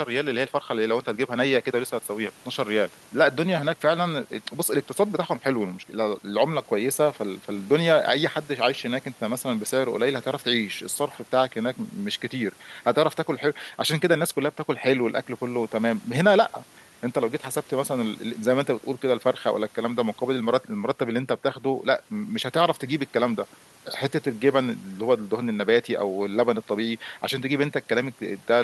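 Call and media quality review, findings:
No call or media quality faults found in the speech carried over the call path.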